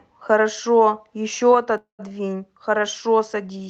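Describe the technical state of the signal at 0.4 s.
At 0.4 s the speech signal is intact, with no dropout, glitch or other fault, and the call path it travels through is working as intended.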